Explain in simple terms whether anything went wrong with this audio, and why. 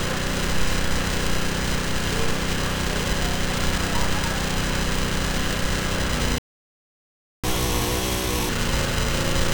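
At 6.38 s the sound cuts out for about a second, until 7.44 s, a playback stall, likely from the player running out of data.

From 7.44 to 8.49 s, catch-up at higher speed follows: the backlog plays at double speed, pitched up by well over half an octave, then settles.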